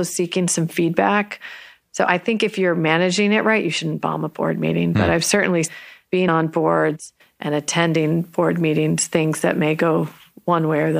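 A run of compressed frames was skipped in this speech recording at 6.27 s: the decoder either never received them or discarded them as corrupt, so playback jumps forward by about 50 ms of audio. The missing stretch shows up as a lurch in timing just before "on boards and attending".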